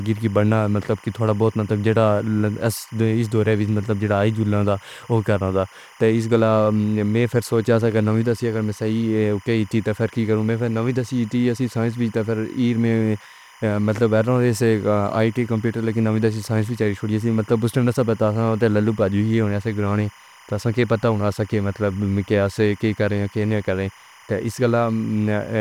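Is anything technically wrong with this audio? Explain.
Yes, there is timecode bleed throughout the speech. Linear timecode running at 25 frames per second has leaked in from an adjacent track or cable, its square wave flipping between roughly 1 and 2 kHz. It sits about 30 dB below the speech as a constant chirping warble.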